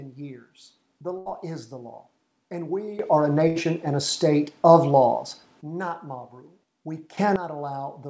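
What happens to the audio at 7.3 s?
A sudden gain jump runs from 7.17 to 7.36 s: the level leaps by about 14 dB between adjacent samples, with sound and background noise rising together. It is likely caused by a gain setting or bit shift applied without any ramp.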